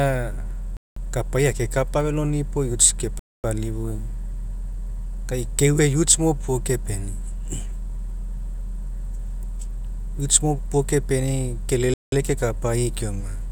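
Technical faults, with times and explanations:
0.77–0.97 s, 3.19–3.44 s and 11.94–12.12 s: Bluetooth stall. The speech drops to dead silence for about 0.2, 0.25 and 0.19 s, then resumes, the first just before "kapai akekapa feloni". Likely radio interference delayed packets until the headphone buffer emptied.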